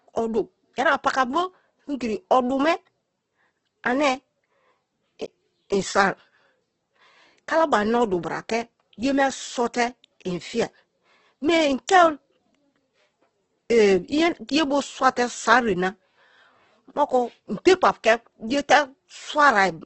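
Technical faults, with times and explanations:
Throughout, Opus compression: speech sounds grainy and rough, not swirly like MP3, as starved bands get noise-filled; nothing above 8.2 kHz, likely a bitrate near 12 kbps.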